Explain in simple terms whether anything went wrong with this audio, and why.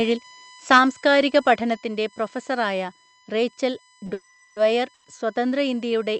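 Several things went wrong in this speech clip.

USB whine: Electrical noise from the USB connection, which pulses a thousand times a second, leaked into the microphone's power or ground. It sounds like a thin, steady whistle at 1 kHz and its higher multiples, strongest up around 16 kHz, running underneath the whole recording.

Microphone overload: From 0.71 to 0.79 s, the loudest moment hits the ceiling of what the recording hardware can capture, and the tops of the peaks get sliced off. This gives that stretch a harsh, crackly edge, most likely because the microphone input was set too high.

Microphone volume stepped down: At 0.78 s and again at 1.77 s, both the voice and the background suddenly drop a notch in loudness. The first drop comes right after the harsh peak, which points to the call software likely turning down the microphone on its own to stop the distortion.

Short stall from a late packet: Around 4.05 to 4.09 s, a piece of audio travelling over the network arrived late. 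The receiver stretched the last bit of sound by about 20 ms while it waited, so one sound is held slightly too long, with a slight buzz or dip.

Call audio freeze: From 4.13 to 4.58 s, and again from 4.94 to 5.10 s, the sound stalls, most likely because network delays emptied the receiver's waiting buffer. During each stall the last sound carries on as a fading buzz or hiss, for about 430 ms the first time and 100 ms the second. The speech then resumes where it stopped, so these are added pauses rather than lost audio.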